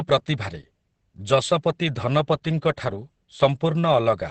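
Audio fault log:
Throughout: Opus voice compression. Nothing is heard above 8.6 kHz, so the speech is cut to wideband. It sounds heavily damaged: muffled, hoarse and slightly robotic. The linear-prediction coder codes the excitation coarsely, which fits a bitrate near 10 kbps.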